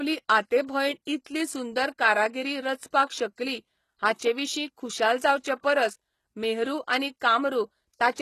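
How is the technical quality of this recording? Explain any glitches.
The technical quality is limited by one fault that runs through the whole speech clip. The treble sounds gritty and lispy, and the high band is rebuilt rather than recorded, likely from HE-AAC compression at a rate that fits roughly 16 kbps. Spectral band replication copies lower bands upward under a coarse envelope, so harmonics misalign and s sounds turn metallic. On a spectrogram, the upper band looks smeared and repeated, and nothing appears above 12.3 kHz.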